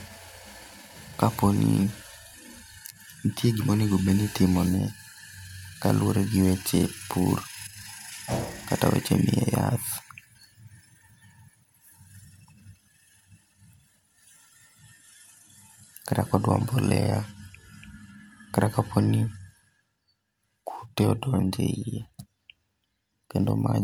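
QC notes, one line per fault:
No fault was found in this speech clip. Nothing needs to be logged for it.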